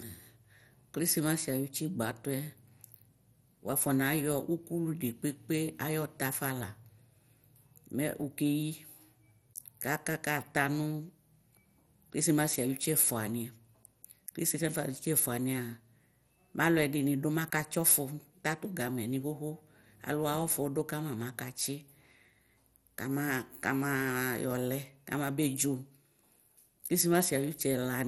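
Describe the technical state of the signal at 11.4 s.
MP2 compression damage is present at 11.4 s and throughout the clip. The speech sounds dull and gurgling, with granular distortion and nothing above 16.5 kHz, likely from MPEG Layer II coding at roughly 64 kbps starving its sub-bands of bits, switching upper bands off and quantising the rest coarsely.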